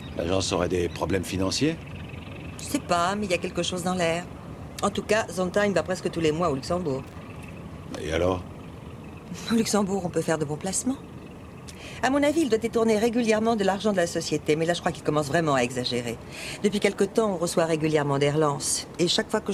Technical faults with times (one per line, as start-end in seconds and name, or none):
7.07-7.17 loose connector crackle